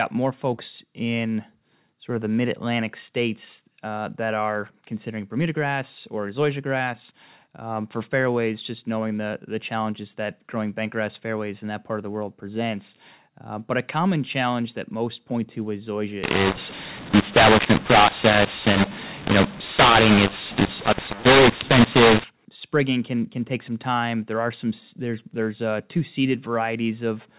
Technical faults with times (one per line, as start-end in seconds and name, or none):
16.24-22.24 mu-law and A-law mixed up